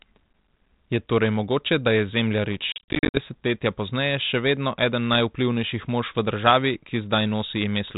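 From 2.72 to 3.18 s, packet loss on an ADPCM call punches about 270 ms of hard-edged silent gaps, the longest 50 ms, into the 32 kbit/s G.726 audio. The decoder's predictor and step size lose sync, so speech resumes slightly distorted after each gap until "desetletja pozneje še vedno".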